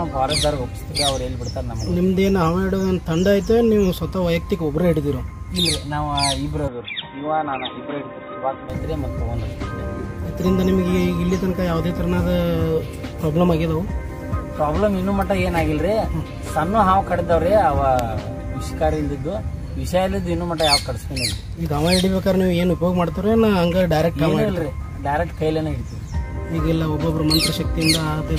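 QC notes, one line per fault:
0.91 to 0.97 s, AAC frame loss with concealment: a brief smeared, noisy patch where about 43 ms of audio, consistent with one lost frame, was rebuilt by the decoder from the last good spectrum with scrambled phase instead of decoded data. Fine detail blurs into a hiss-like wash before normal decoding resumes. A spectrogram shows a narrow vertical smudge with lost harmonic structure. The waveform shows a short stretch of noise-like texture with no gap.
6.68 to 8.70 s, input switched to a poorer device: the sound turns dull and boxy with no silence at the change. Nothing above 3.8 kHz survives, the level drops by about 5 dB, and a new noise floor about 35 dB below the signal appears. This is likely a switch to a narrower-band microphone or headset call profile. It clears again at 8.70 s. A spectrogram shows a flat ceiling at 3.8 kHz across this span, and the waveform envelope steps down.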